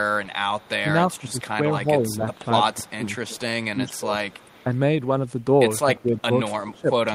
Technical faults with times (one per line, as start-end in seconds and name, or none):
0.25-1.45 echo leak
0.82-4.72 speech suppressed in double talk
2.14-3.28 echo leak
3.91-4.64 echo leak
5.96-7.15 speech suppressed in double talk
6.00-6.79 echo leak